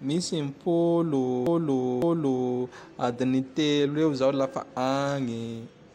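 From 1.47 s to 2.58 s the speech stutters: a chunk of about 0.56 s plays, then comes round twice more before the audio moves on. That's repeated frames. A short run of compressed data, which fits roughly six frames, got written or sent again, so the decoder played the same slice back-to-back. It stretches the clip by about 1.1 s and breaks the natural flow of the speech.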